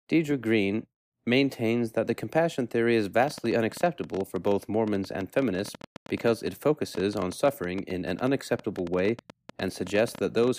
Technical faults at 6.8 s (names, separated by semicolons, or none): train of clicks